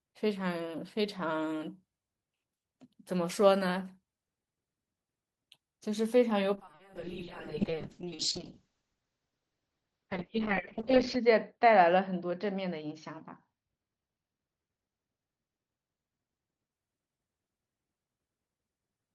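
From 6.56 to 16.77 s, a call bitrate drop starves the encoder: audio turns coarse, watery, muffled above 8 kHz, and stays continuous, never gapped like packet loss.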